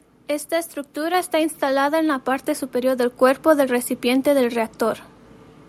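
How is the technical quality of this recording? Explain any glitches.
There is one glitch in the speech. At 1.14 s the microphone volume stepped up: the call software judged the input too quiet and raised the device's gain in a single jump of about 4 dB. Speech and background noise get louder together and instantly. A speaker simply talking louder would leave the background unchanged, and a gradual gain control would ramp the level rather than jump it.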